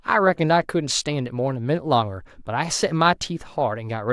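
No technical faults can be heard anywhere in this speech recording.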